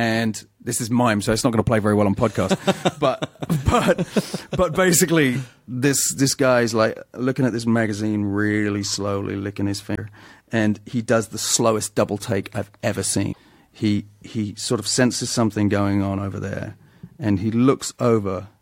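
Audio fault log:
9.92–9.98 s and 13.29–13.38 s, damaged data in a compressed stream: bytes in the encoded speech stream are corrupted, so the decoder misreads those frames, loses sync and hunts for the next valid frame header. Each hit is a short chirp, squawk, click or hole, about 66 ms after "really slowly licking his" and before "and he does the", then about 94 ms right after "double take I've ever", breaking into the speech before decoding recovers.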